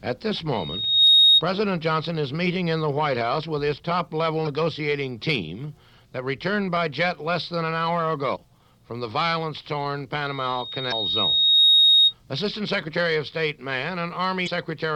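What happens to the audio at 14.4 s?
Damaged data in a compressed stream hits at 14.43 to 14.48 s, a burst of about 44 ms. Part of the encoded stream at that point is corrupt, so the decoder can't read those frames correctly. It loses its place and has to search forward for the next valid frame header before playback carries on. The result is a brief squawk or blip that doesn't belong to the surrounding sound.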